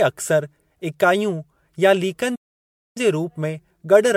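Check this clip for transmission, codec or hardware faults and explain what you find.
Two faults are present: a generation loss throughout the speech, and a playback stall partway through.

Generation loss, throughout: the speech sounds swirly, smeared and hollow, with blurred onsets. This likely comes from repeated MP3 re-encoding, around five passes, which fits a 96 kbit/s chain.

Playback stall, 2.35 to 2.97 s: the speech cuts to silence for about 0.6 s, then resumes. The player likely ran out of data or was blocked.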